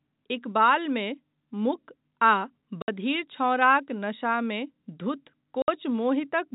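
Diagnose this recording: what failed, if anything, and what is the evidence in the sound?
Network packet loss filled with silence: lost packets played back as nothing, cutting 60 ms holes with hard edges at 2.82 and 5.62 s, consistent with three 20 ms packets each.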